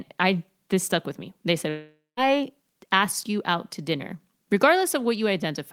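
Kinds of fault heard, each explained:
Long network dropout: at 1.69 s the speech cuts out and a fading, buzzy smear of the last sound fills in, ending in 0.19 s of silence before speech resumes at 2.2 s. About 0.48 s is lost, likely from packets that never arrived.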